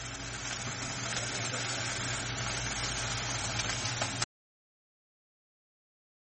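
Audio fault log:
throughout: MP3 compression. The encoder likely ran short of bits, which fits a low rate around 32 kbps, so it discarded everything above 8.3 kHz and zeroed quieter frequency lines that then flicker in and out between frames. The result is a dull top end with a watery, swirling texture and metallic chirps on bright, noisy detail, while sharp onsets smear instead of striking cleanly. The codec damage is plainly audible.
4.24 s to end: audio dropout to silence. The input feed was most likely lost, perhaps through a disconnected source, a broken link or an accidental mute, while recording carried on writing silence. The sound cuts off abruptly mid-flow and never returns. From that point the gap is silence, with no room tone or background hiss, and whatever was happening after the cut is missing from the recording.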